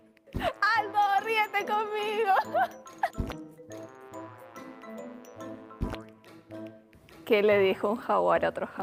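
No technical faults can be heard anywhere in the audio. There is no event to point to or place at any moment.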